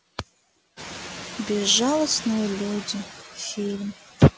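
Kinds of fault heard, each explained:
Noise suppressor artifacts: background noise drops about 13 dB between words and swells under speech; on a spectrogram the noise floor flickers in patchy, gated blocks.
Noise suppressor catching up: as room noise jumps near 1 s, 0.76–1.41 s gets only about 4 dB reduction, adapting over 650 ms; the spectrogram shows a bright noise band fading.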